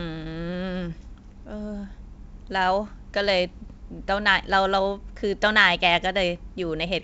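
The speech comes through G.722 wideband telephone coding at 64 kbit/s, with the band reaching up to about 7 kHz and any coding damage no more than faint.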